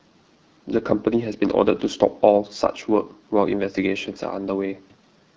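Throughout, the speech sounds rough and raspy, with plainly audible coding damage and nothing above 7.6 kHz. This is the AMR wideband (HD Voice) codec at one of its lowest modes, consistent with 8.85 kbit/s, where the vocal tract model has too few bits to code speech cleanly.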